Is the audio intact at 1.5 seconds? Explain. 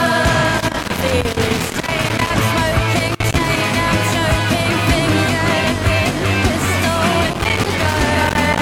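No. At 1.5 seconds the music sits inside an irregular burst of crackle and scratching that runs from about 0.58 to 2.30 s. This is loose connector crackle: a worn or dirty contact in the signal path is making and breaking as it shifts, so the music is chopped into fragments, and any DC present on the line turns each break into a click or pop.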